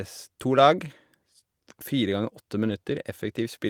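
At 2.69 to 2.71 s there is a lost packet rebuilt from error correction. The 20 ms stretch fits one dropped packet. The next packet carried a low-bitrate copy, which the decoder played instead. So there is no gap, just a brief rougher, noisier patch in the speech.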